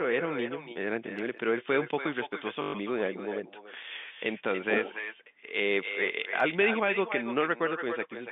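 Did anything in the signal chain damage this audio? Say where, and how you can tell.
Yes. The call processing stage let an echo with no canceller through. Throughout the speech, every phrase is followed roughly a third of a second later by a quieter, thinner copy at about 9 dB below the direct sound. That is the far end's loudspeaker feeding its own microphone and the return path carrying it back across the network, with no echo canceller removing it before it reaches this end.

The network stage shows packet loss with the last packet repeated, from 2.62 to 2.74 s. For those 120 ms the sound turns into a short robotic stutter: the same fragment loops, and the run buzzes at a steady rate. That fits six lost 20 ms packets, with the receiver replaying the last good one until fresh audio arrived. The G.711 telephone coding narrows the band to the usual line range.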